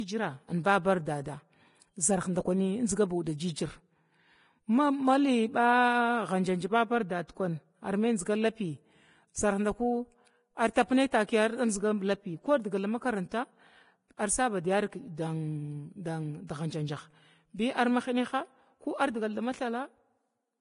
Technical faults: Vorbis compression

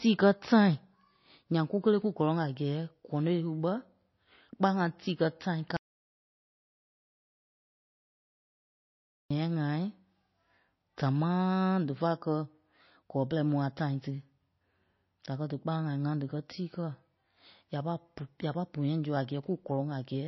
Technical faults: MP3 compression; audio dropout to silence

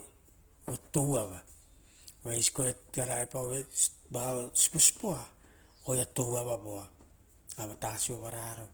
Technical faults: Opus compression

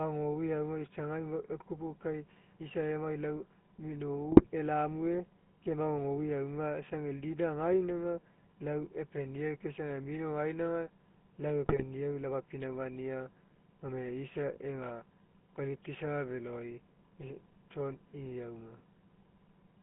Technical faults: GSM full-rate codec; GSM bit errors

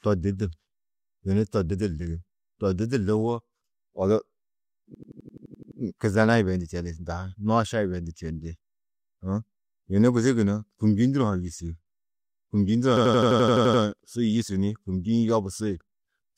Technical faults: system hang loop

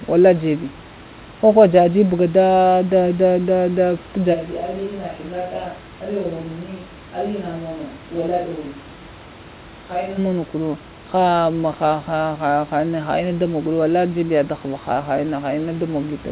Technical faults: switch to a distant microphone

